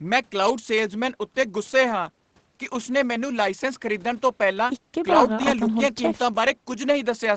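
Nothing in this speech stands out as a fault, and the way it tops out around 8 kHz is just what you'd expect from audio that has come through a call's microphone processing and an Opus-coded call path.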